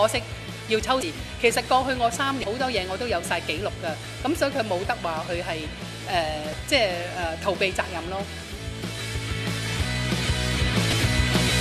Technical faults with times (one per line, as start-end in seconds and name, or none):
1.00-1.03 damaged data in a compressed stream
2.41-2.44 damaged data in a compressed stream
6.51-6.54 damaged data in a compressed stream
10.90-10.93 damaged data in a compressed stream